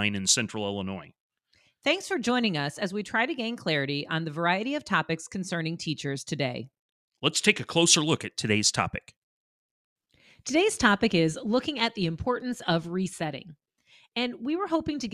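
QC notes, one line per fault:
No faults found in this speech recording.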